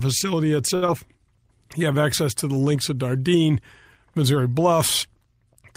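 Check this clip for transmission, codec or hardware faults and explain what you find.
Two transmission faults occur close together in this speech clip, both just under a second in.

From 0.75 to 0.84 s there is a short stall from a late packet. A packet arrived after it was due, the jitter buffer ran dry, and the receiver stretched the last sound for about 66 ms until it came. Nothing is lost, but the sound hangs unnaturally and playback runs that much later.

From 0.86 to 0.90 s there is short concealed packet loss. About 40 ms of audio never reached the decoder in time, and the receiver covered the gap with roughly 17 ms of extended sound before rejoining, pulling the delay back slightly. The result is a brief smear with a small skip forward.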